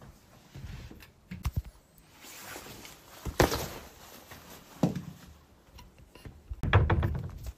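A CD skip hits at 1.42 s and again from 6.61 to 6.63 s. The laser jumps tracks, so the sound briefly mutes, roughly 10 and 30 ms, then resumes elsewhere.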